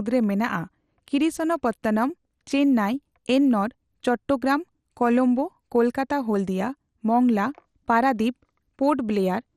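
From start to finish the speech sounds dull, with nothing above 14.4 kHz, and carries a plainly audible gurgling, granular roughness as upper bands flicker in and out. The likely cause is MP2 compression short of bits, which fits about 64 kbps, leaving coarsely quantised sub-bands.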